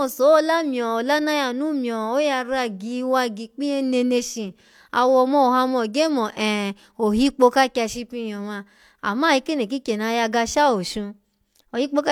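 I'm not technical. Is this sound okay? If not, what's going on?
Yes, this one sounds fine, with nothing going wrong in the recording that you'd need to worry about.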